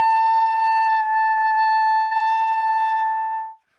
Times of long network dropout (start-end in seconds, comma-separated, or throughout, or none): none